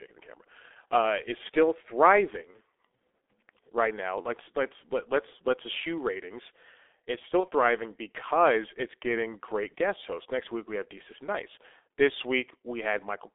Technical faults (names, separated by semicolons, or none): G.723.1 codec; VoIP packet loss concealed by the speech codec